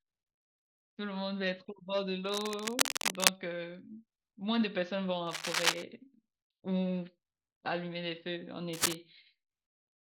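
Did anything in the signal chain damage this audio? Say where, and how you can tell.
Yes. Cable scratch noise appears at 2.26–3.29 s, 5.27–5.83 s and 8.73–8.95 s, as dense, ragged bursts of rustling over the speech, two of them about 5 dB above it and the middle one roughly level with it. The stage is likely analogue wiring, with a worn cable or connector whose contact resistance flickered as it moved. On a spectrogram each burst is an irregular broadband smear. On the waveform it is jagged, uneven spikes riding over the speech envelope.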